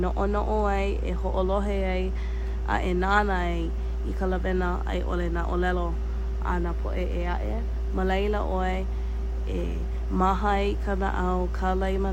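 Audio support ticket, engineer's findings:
No faults found in the speech clip during the engineer's review.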